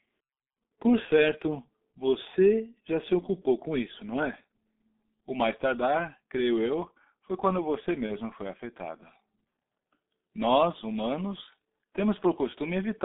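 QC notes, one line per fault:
throughout: G.723.1 codec at 6.3 kbit/s, band about 200 Hz to 3.6 kHz; muffled, hoarse, blurred consonants; spectrogram empty above 3.6 kHz, harmonics smeared.
8.06–8.12 s: VoIP packet loss concealed by the speech codec; a 30 ms gap, which fits one lost frame, is filled with a fading extrapolation of the last sound, visible as a frozen spectrum and a sagging waveform envelope.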